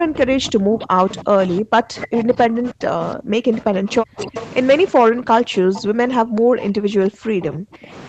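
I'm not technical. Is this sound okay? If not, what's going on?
No. From the start to 4.35 s and again from 4.89 to 7.93 s, the voice keeps dipping much quieter or breaking up. This is speech suppressed in double talk: both people were likely talking at once, and the call's echo remover mistook this voice for echo and turned it down.

There is also a faint, delayed repeat of the voice, trailing about a third of a second behind, at 0.8 to 1.58 s, 1.96 to 2.23 s, 2.66 to 2.71 s, 4.35 to 4.49 s, 5.74 to 5.81 s and 6.59 to 6.65 s. This is echo leak, likely from a speakerphone whose echo remover let part of the sound slip back into the call.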